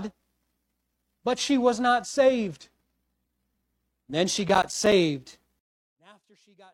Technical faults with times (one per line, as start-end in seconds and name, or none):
0.00-5.24 adaptive stream starting at a low bitrate
4.49-4.92 processor overload crackle
5.59-6.74 one channel inverted